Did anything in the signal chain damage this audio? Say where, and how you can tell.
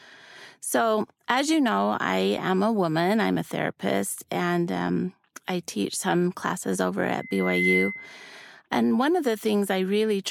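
Yes. Just after "some classes over", at 7.19 s, a single piercing tone near 2.1 kHz swells out of the speech. It climbs over roughly half a second and rings on until 8.26 s, settling around 5 dB above the speech itself. This is loudspeaker feedback squeal in the analogue acoustic path. The microphone was picking up the loudspeaker it fed, and at 2.1 kHz the loop's gain exceeded one, so that frequency reinforced itself on every pass.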